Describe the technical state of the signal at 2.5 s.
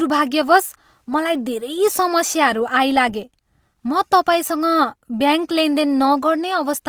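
At 2.5 s the speech carries Opus compression artefacts, present for the whole clip rather than at that moment alone. Harmonic parts of the voice sound grainy and rough, with a noisy texture where bands have been filled in instead of left empty. Bandwidth stays wide, reaching about 20.4 kHz, so the damage is textural, not muffling. This points to the music-oriented CELT mode, likely at a low bitrate near 24 kbps.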